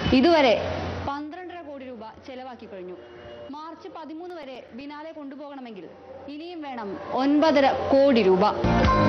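From 4.3 to 4.81 s there is a short run of CD scratch ticks. Five brief clicks fall in about half a second, one roughly every eighth of a second. Each is tiny, the longest only a few milliseconds. A blemish on the disc surface corrupted more data than error correction could repair, once per revolution. The player then patched or muted the lost samples, leaving these small regular ticks. The fader-style level changes in the clip sound smooth.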